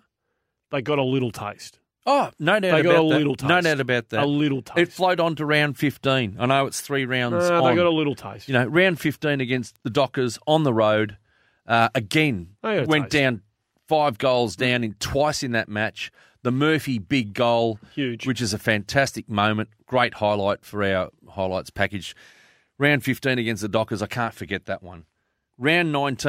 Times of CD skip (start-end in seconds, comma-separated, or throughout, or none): none